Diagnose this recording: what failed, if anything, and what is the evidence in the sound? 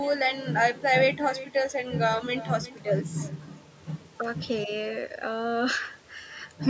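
Echo with no canceller runs through the whole speech clip. Every phrase returns as a fainter, thinner copy about 18 dB down and roughly four tenths of a second late. The far end's loudspeaker feeds its microphone, and the call processing there never subtracts it, so the round trip through the network comes back. Room reverberation would smear continuously from the source; this is a distinct delayed copy. The call audio stops at 8 kHz.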